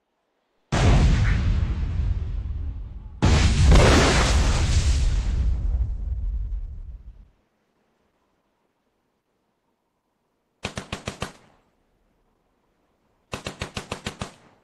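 At 4.32 s the adaptive stream drops to a lower bitrate, switching mid-playback to a leaner encoding of the same audio, most likely because the connection slowed. The change is abrupt and leaves no gap, and the lower quality lasts to the end of the clip. From that point codec artefacts are more audible, which fits a step down from around 64 to 16 kbit/s Opus.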